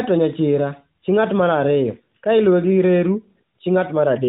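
No technical faults can be heard in the speech, which comes through with the narrowband sound of a mobile call.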